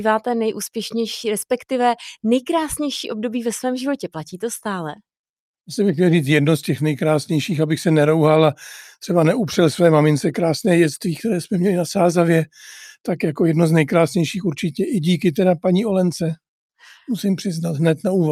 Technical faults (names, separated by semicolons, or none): none